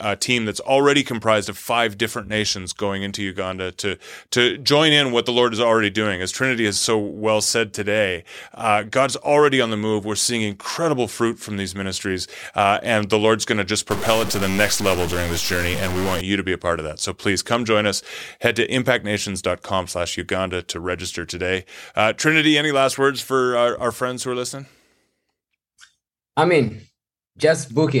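A speech recording in which, from 13.91 to 16.21 s, the sound turns harsh and buzzy, with a gritty noise floor that persists even in the pauses. This is likely a stuck bit: one bit of each sample held fixed at 0 or 1, perhaps by a broken data line or converter, so that roughly half the samples jump by that bit's weight, a step of about -20 dBFS, in a pattern that follows the waveform and its sign.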